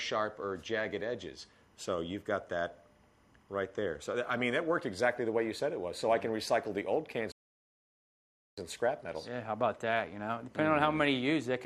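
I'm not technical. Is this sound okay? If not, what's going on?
No. A faint, steady chirping warble sits behind the sound from start to finish, flicking rapidly between two high pitches, one around 1 kHz and the other around 2 kHz. This is timecode bleed. Timecode is a timing signal used to keep recording equipment in step, running here at 25 frames per second. It was recorded on a separate track or cable and has leaked into the audio.

At 7.32 seconds the sound suddenly drops to silence, then carries on at 8.58 seconds exactly where it left off. This is a rebuffering stall. The player ran out of downloaded audio and paused until more arrived. Nothing is missing, but the gap adds about 1.26 seconds of dead air to the playback.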